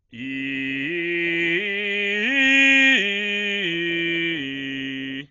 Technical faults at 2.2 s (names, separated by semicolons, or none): Dolby Digital compression